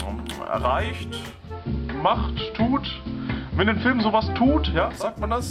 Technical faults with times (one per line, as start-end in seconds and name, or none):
1.23-5.14 digital radio blending to analogue